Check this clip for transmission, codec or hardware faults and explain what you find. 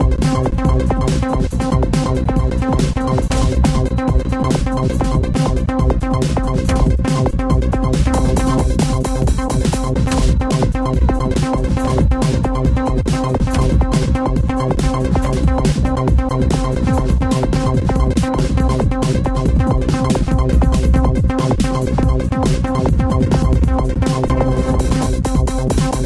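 No faults found in this audio; nothing to flag.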